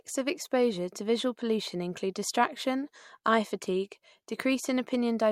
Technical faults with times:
none

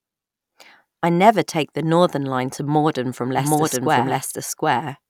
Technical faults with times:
3.38-5.10 doubled audio track

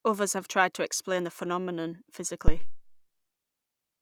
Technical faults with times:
2.48-2.87 phantom power thump

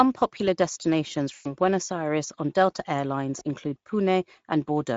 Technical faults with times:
0.00-4.96 Speex codec
1.33-1.54 VoIP packet loss concealed by the speech codec
3.39-3.43 VoIP packet loss concealed by the speech codec

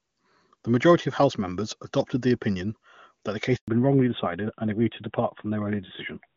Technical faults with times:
3.56-3.68 handover gap
3.68-6.36 fallback to narrowband

